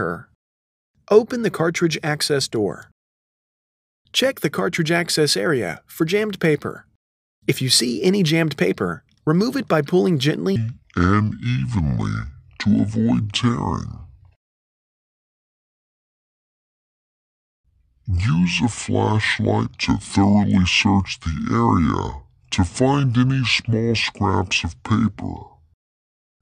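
The audio's second part was likely resampled or played against the wrong clock, so from 10.56 s to the end it runs as a section at the wrong speed, at about 0.6 times its original rate. Because speed and pitch move together here, everything after that point is drawn out and sits roughly ten semitones lower, turning deep and sluggish the instant the change takes hold, while the opening stretch keeps its original pace.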